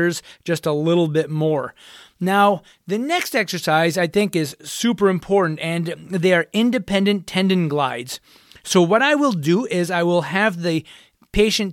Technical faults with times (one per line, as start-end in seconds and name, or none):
none